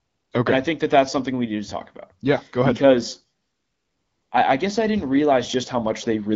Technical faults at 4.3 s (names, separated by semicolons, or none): AMR comfort noise